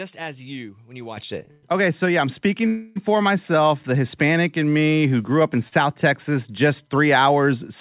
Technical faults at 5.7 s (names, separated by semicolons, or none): short stall from a late packet